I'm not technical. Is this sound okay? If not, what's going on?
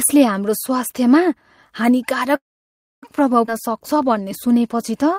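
No. At 2.35 s the audio stops for about 0.7 s, until 3.06 s. The last sound trails off briefly, then there is near-silence for about 0.6 s before it picks up where it left off. This is a call audio freeze, likely from data arriving late.

At 3.47 to 3.50 s the sound jumps forward. Roughly 0.3 s is lost and the two sides are joined almost directly. This is a skip ahead: a stretch of audio was dropped, so playback jumped to the audio already waiting.

From 3.54 s to 5.15 s the audio plays at about 94% speed, stretched by about 95 ms in total with the pitch unchanged, so sounds come out slightly drawn out. This is a jitter buffer slow-down, where the system repeats tiny slices of sound to rebuild its reserve.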